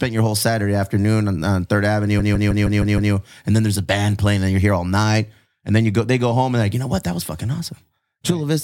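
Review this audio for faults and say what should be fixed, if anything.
Repeated frames from 2.18 to 3.12 s: a 156.7 ms stretch of speech plays six extra times, a rhythmic stutter that lengthens the audio by 940 ms. Unlike a dropout, nothing goes missing. The same fragment recurs, which points to a short run of compressed frames being written or sent more than once. To prevent it, have the writer or receiver discard duplicate frames by sequence number or timestamp.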